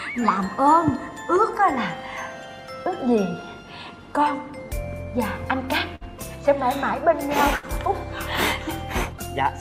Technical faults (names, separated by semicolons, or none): burst of packet loss